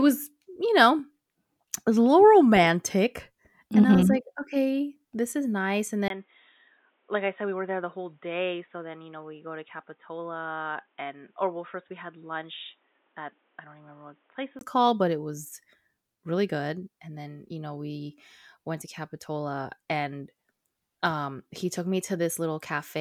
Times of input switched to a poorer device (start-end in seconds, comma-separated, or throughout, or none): 6.08-14.61